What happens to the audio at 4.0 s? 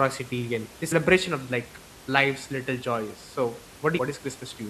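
A short, sharp blip cuts into the speech at about 3.97 s, lasting well under a twentieth of a second, with the room noise about 21 dB below the speech. This is damaged data in the compressed stream: data there was lost or corrupted, so the decoder could not read that frame properly, lost sync, and had to hunt for the next valid frame header.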